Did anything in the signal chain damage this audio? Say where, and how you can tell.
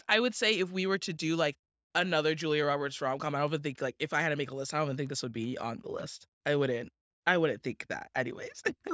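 No, nothing damaged this audio.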